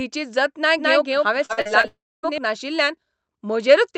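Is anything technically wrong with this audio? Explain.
Yes, there are three distinct faults, all within the middle of the clip, on a call path whose Opus coding caps the top end near 8 kHz.

Doubled audio track, 0.79 to 2.38 s: a second full-band copy of the speech runs about a fifth of a second behind the original, at about the same level. It has no reverberant tail or room colouring, and it cuts in and out abruptly at both ends. The likely cause is the same signal reaching the mix twice through paths of different latency, which gives a slapback, doubled-talker effect.

Repeated packet loss (robotic sound), 1.45 to 1.85 s: several short holes in the stream, the longest about 41 ms, were each patched by extending the preceding sound before the next hole arrived. About a third of that stretch is concealment rather than real signal. The back-to-back patching chops the speech into fragments with small pieces missing.

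Long network dropout, 1.87 to 2.25 s: the audio stops arriving for roughly 0.36 s, most likely because of a stall in network delivery. The receiver first continues the last sound as a fading buzz or hiss. About the final 0.26 s is essentially silent. Speech then resumes without the lost portion, so the content jumps forward rather than picking up where it broke off.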